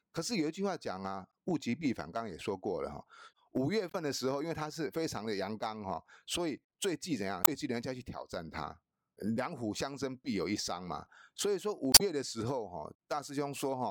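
Damaged data in the compressed stream of this speech recording leaves the decoder unable to read a few frames, so it loses sync and hunts for the next valid frame header. Each time, this comes out as a short chirp or blip: from 3.89 to 3.95 s, from 7.41 to 7.49 s, and from 11.91 to 12.01 s. The last and longest of these also shifts the timing by about 4 ms.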